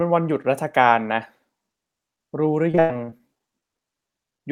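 From 2.71 s to 4.41 s the speech turns choppy, with robotic, stuttering fragments. This is repeated packet loss: many short holes, up to 96 ms each, are patched by stretching the preceding sound, concealing roughly a fifth of that stretch.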